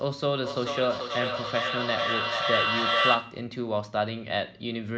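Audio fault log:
0.43–3.52 s, feedback echo between two devices: the speech keeps coming back roughly every 0.4 s, each pass a bit thinner and more ringy. It's the classic two-devices-in-one-room loop. One device plays what the other's mic sent, that mic hears it again, and neither echo canceller touches the other's playback. The loop's hot enough that the repeats build instead of dying off, peaking about 3 dB above the speech itself.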